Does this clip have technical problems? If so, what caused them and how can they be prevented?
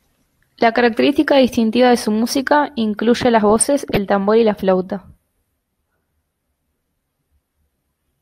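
Yes. Between 3.50 and 3.97 s, after "su música incluye las" and before "tambor y la", burbling noise is laid over the speech. This is DAB burbling. Weak reception let a bit error rate of a few tenths of a percent slip past error correction into the MP2 data, so corrupted samples put short blips of noise into individual sub-bands for roughly twenty consecutive frames. Better antenna placement or a stronger multiplex signal prevents it.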